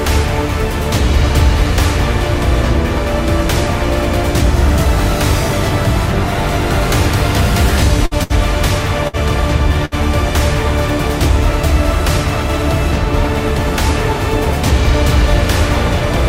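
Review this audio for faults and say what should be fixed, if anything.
Burst of packet loss at 8.05–8.14 s, 8.23–8.33 s, 9.08–9.16 s and 9.85–9.94 s. In each, roughly 60 ms of audio never arrived in time. The receiver covered the gap by stretching out the last sound it had and fading it down. The audio then picks up about 60 ms further along, with that stretch gone.

A deeper jitter buffer, forward error correction or packet redundancy on the link would prevent these losses.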